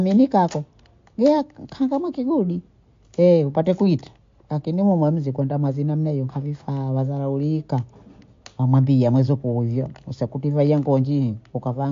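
From start to finish the speech has plainly audible MP3 compression, likely the cause of what you're hearing. Nothing comes through above 7.2 kHz, so the top end is cut off and the s sounds lose their edge. The damage fits a low bitrate of around 48 kbps. At that rate the encoder runs out of bits and drops weaker frequency detail, which flickers in and out between frames. The result is a watery, swirly texture, with smeared attacks.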